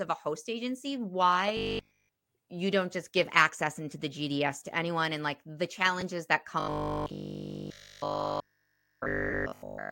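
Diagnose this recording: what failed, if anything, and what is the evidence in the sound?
The playback buffer was likely starved, producing robotic sound from repeated short buffers. From 1.57 to 2.09 s, just before "you don't just give", and again from 6.60 to 9.90 s, the sound becomes a rigid, metallic buzz at 50 Hz. That pitch fits a 20 ms block being replayed, and all of both stretches is that repeated material, so the real audio is skipped while the envelope still roughly follows the speech.

On the Bluetooth link, LE Audio frames were lost and the LC3 decoder concealed the gaps. At 6.01 s, just after "anyone and like the", a 10 ms dropout points to a single missing frame. From 9.30 to 9.33 s, a 30 ms dropout suggests about three consecutive frames. The decoder refilled each gap by reusing the previous spectrum with randomised signs, so tonal content turns into a brief noisy smear instead of a clean cut.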